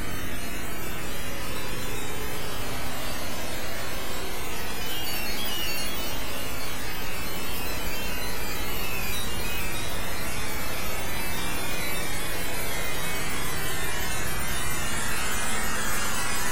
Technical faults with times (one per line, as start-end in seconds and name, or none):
none